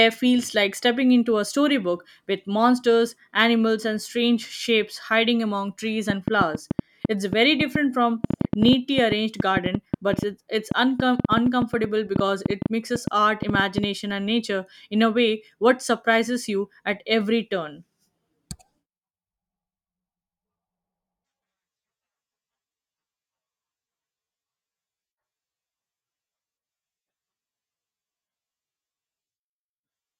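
Right after "shapes hiding among trees", at 6.1 s, a train of clicks starts and runs until 13.85 s, just before "and nature in a". There are around fifty similar pops, about 6.9 a second at an uneven pace, poking well above the speech, likely from interference or a faulty connection.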